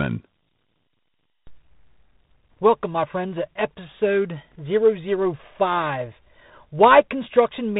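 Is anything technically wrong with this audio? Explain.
Yes. Throughout the speech there is a rough, gritty and muffled quality, with nothing above about 3.9 kHz. This is tandem speech coding: the call passed through a speech codec twice in a row, likely G.726 ADPCM on links joined by an A-law section. Each stage decoded and re-coded the previous stage's output, so the quantisation noise and band-limiting compound into a harsher, duller sound than a single pass would give.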